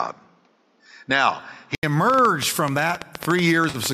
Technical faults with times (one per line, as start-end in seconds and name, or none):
0.00-1.83 input switched to a poorer device
1.41 AAC frame loss with concealment
2.10-3.87 train of clicks
3.69-3.77 AAC frame loss with concealment